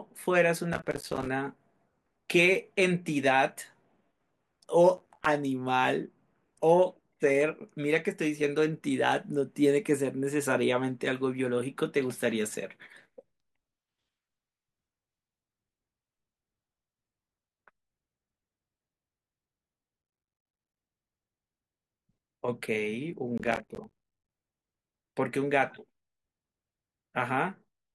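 Processor overload crackle hits this speech clip at 0.73–1.28 s, 4.97–5.26 s and 23.38–24.30 s: the processor misses roughly 50, 20 and 70 buffer deadlines respectively over each stretch, each of roughly 5 ms, leaving hard-edged silent gaps that merge into gritty crackling.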